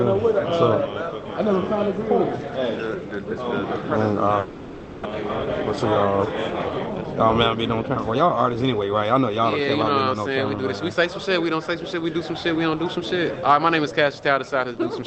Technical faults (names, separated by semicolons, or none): long network dropout; jitter buffer speed-up